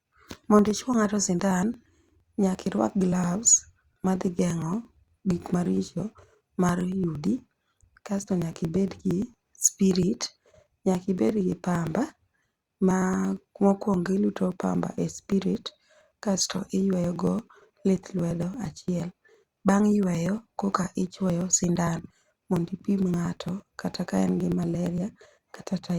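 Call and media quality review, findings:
Periodic USB or driver dropouts, 0.13–25.9 s: the audio path is stalled every 0.115 s, about nine times a second, and around 10 ms of speech is skipped each time. This gives a steady ticking through the speech, roughly 200 ticks, silent in pauses.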